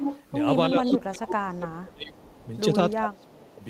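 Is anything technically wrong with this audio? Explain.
Yes, two faults are audible.

Echo leak at 0.00–0.24, 0.83–0.97, 2.16–2.47 and 3.21–3.27 s: a copy of the speech returns 357 ms late. It is nearly as loud as the speech at first and then fades to faint. The likely cause is a far-end loudspeaker echo that its canceller missed.

Speech suppressed in double talk at 0.70–2.16, 2.44–2.54 and 2.96–3.62 s: the speech drops by about 25 dB, with only a slight dip at 2.44 s. This is likely an echo canceller turning down its own talker along with the loudspeaker echo while they overlap.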